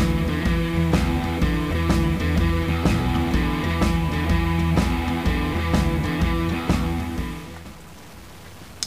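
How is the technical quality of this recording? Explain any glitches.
Technical quality is compromised by a harsh, buzzy distortion across the whole recording, with noise filling the pauses. The likely cause is a stuck bit, whose step of roughly -40 dBFS shifts about half the samples and flips with small-signal sign.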